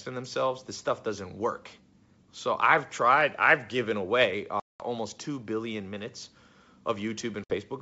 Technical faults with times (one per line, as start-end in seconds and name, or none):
4.60-4.86 packet loss on an ADPCM call
7.44-7.57 packet loss on an ADPCM call